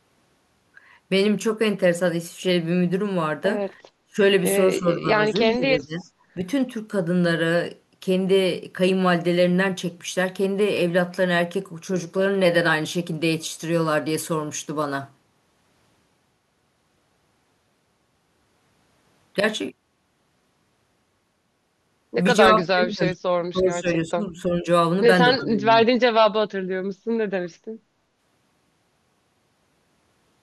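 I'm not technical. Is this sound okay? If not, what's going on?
No, not quite. There are two call-style problems in this speech.

The first is speech suppressed in double talk. The voice dips or drops out in short bursts at 4.09–4.22 s, 4.80–5.37 s and 5.53–6.06 s, and again for about two seconds at 22.49–24.67 s and at 25.36–26.21 s. The later ones are the deepest, nearly vanishing. This is likely the call's echo canceller ducking the voice because the other side was talking at the same moment and it could not tell the two apart.

The second is echo leak: a faint, delayed copy of the voice, trailing by about a third of a second, slips through at 5.99–6.10 s and again at 25.38–25.44 s. The second one is a bit more noticeable. That likely happens when one side is on a loudspeaker and its echo canceller misses a scrap of what its microphone picked up, so it gets sent back.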